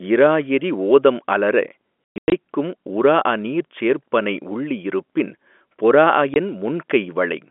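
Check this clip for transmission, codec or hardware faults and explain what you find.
Two stretches of packet loss filled with silence break up the speech. From 2.05 to 2.32 s the speech drops out in a cluster of hard-edged holes, about 240 ms of silence scattered across 280 ms, the longest gap 120 ms. At 6.34 to 6.36 s a single 20 ms hole cuts the speech the same way. Packets never arrived and the receiver inserted silence, so every gap is a multiple of one packet, which fits 20 ms packets, on a G.711 telephone line.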